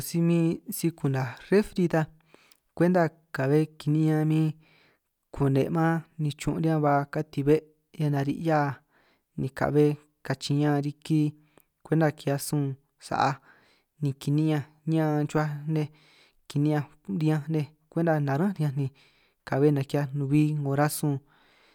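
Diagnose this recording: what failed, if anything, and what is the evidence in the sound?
Nothing in the recording stood out as a fault on listening.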